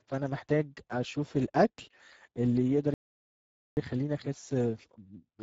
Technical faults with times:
0.00-5.43 Speex codec
2.94-3.77 playback stall

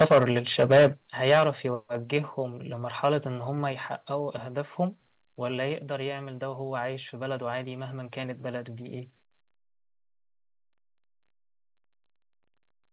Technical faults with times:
0.00-0.31 microphone overload
0.02 microphone volume stepped down
0.60-0.87 microphone overload
1.02 microphone volume stepped down
1.27-1.48 microphone overload
2.04 microphone volume stepped down
3.72 microphone volume stepped down

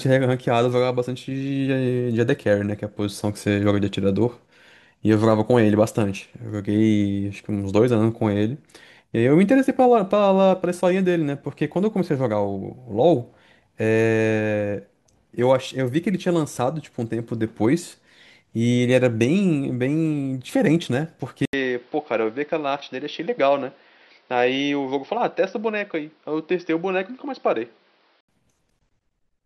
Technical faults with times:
21.45-28.29 input switched to a poorer device

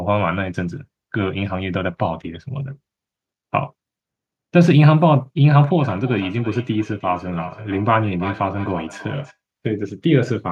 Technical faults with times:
5.56-9.37 feedback echo between two devices

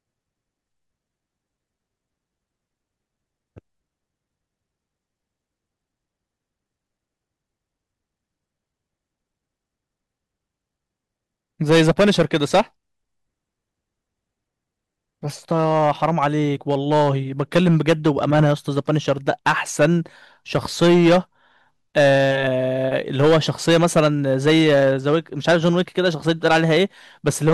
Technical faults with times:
11.70-12.61 hard clipping
15.52-16.27 hard clipping
16.70-19.93 hard clipping
20.55-21.18 hard clipping
21.97-22.47 hard clipping
22.96-26.83 hard clipping
27.27-27.54 hard clipping

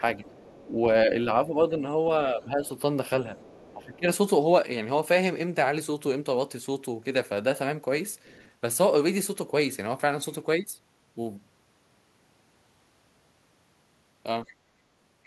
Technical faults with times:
0.00-0.24 speech suppressed in double talk
0.00-0.69 other side's voice leaking through
1.05-1.92 speech suppressed in double talk
2.30-2.64 speech suppressed in double talk
3.37-3.74 other side's voice leaking through
3.74-4.07 speech suppressed in double talk
8.24-8.50 other side's voice leaking through
14.47-14.54 other side's voice leaking through

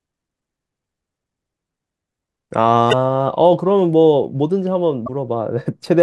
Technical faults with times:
2.89-2.93 damaged data in a compressed stream
5.05-5.09 damaged data in a compressed stream

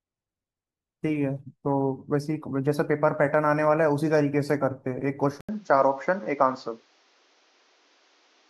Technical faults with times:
5.41-8.49 input switched to a poorer device

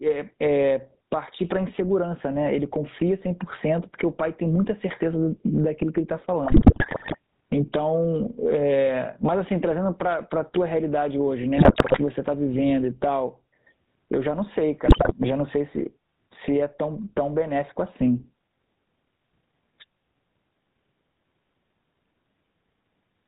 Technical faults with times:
0.00-23.27 gain pumping
0.00-23.27 GSM full-rate codec
6.46-7.16 GSM bit errors
11.56-11.99 GSM bit errors
14.86-15.13 GSM bit errors

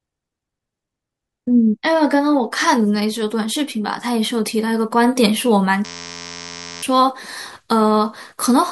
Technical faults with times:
5.85-6.83 system hang loop

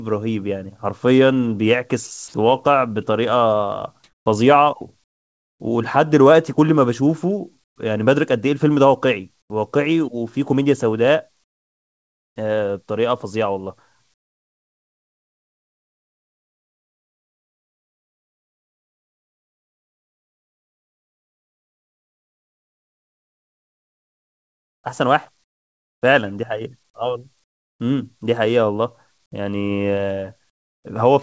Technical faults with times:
4.04-5.60 comfort noise in place of the background
7.64-7.76 comfort noise in place of the background
9.42-9.50 comfort noise in place of the background
11.44-12.36 comfort noise in place of the background
14.14-26.02 comfort noise in place of the background
27.44-27.80 comfort noise in place of the background
30.50-30.84 comfort noise in place of the background

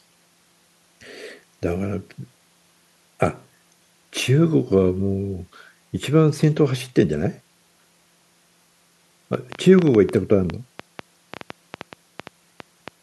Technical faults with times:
9.34-12.89 train of clicks

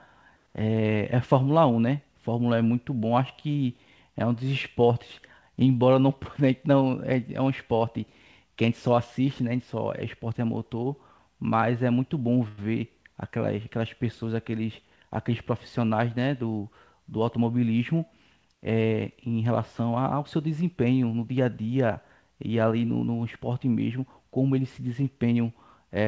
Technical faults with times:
12.48-12.59 short stall from a late packet
14.81-15.52 jitter buffer speed-up

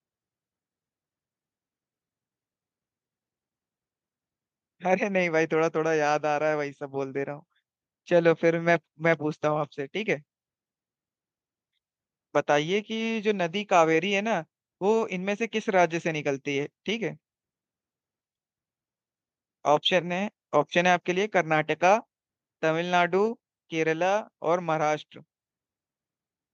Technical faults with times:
none

